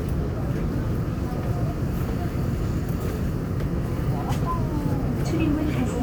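Nothing to flag in this short recording of sounds, since no technical faults turn up anywhere in it.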